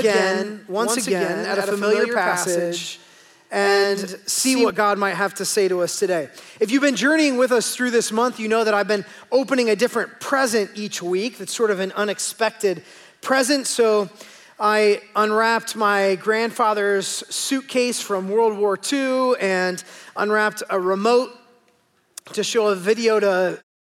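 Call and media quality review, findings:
Doubled audio track, 0.0–4.7 s: every sound repeats about a tenth of a second later, copy about 5 dB quieter, dry, full-band. Present from the first instant, stops abruptly at 4.7 s. Likely a slower second capture path mixed in.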